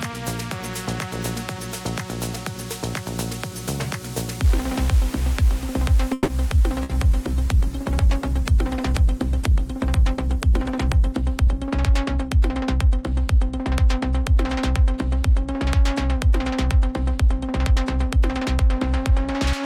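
At 6.13 s the sound stops moving forward for about 150 ms, to 6.31 s. What fills the gap is a continuation of the last sound that fades rather than drops to silence. This is a call audio freeze, likely from packets held up in transit so the jitter buffer ran dry. When they arrive, playback resumes where it stopped, adding delay but losing nothing. On a spectrogram the last spectral shape is smeared sideways, with energy tapering.

Half a second later, at 6.83 s, comes a burst of packet loss lasting about 90 ms. Packets went missing or arrived too late, so about 60 ms of audio is gone. The receiver stretched the preceding sound into a brief held buzz or hiss, then jumped ahead. The waveform shows a short decaying stretch followed by an abrupt resumption that doesn't line up with what came before.

From 6.82 s to 11.26 s the call bitrate drop takes hold. The encoder's rate falls from 96 kbps to 17 kbps and stays at that floor for about 4.4 s. 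With so few bits, the coding turns coarse and the top of the spectrum is cut away. The sound becomes muffled and watery. A spectrogram shows a hard ceiling where high-frequency energy vanishes, with blotchy, quantised texture below it until full bandwidth returns.

Two jitter buffer speed-ups follow. From 11.22 s to 12.04 s playback runs at about 107%, and from 17.22 s to 19.12 s at about 105%. The receiver was trimming excess buffered delay by repeatedly cutting out tiny pitch-period slices, a few tens of milliseconds in the first stretch and roughly a tenth of a second in the second. Pitch stays put while timing compresses, so the sound feels hurried. On a waveform, whole periodic cycles are missing here and there, while the remaining cycles keep their shape and spacing.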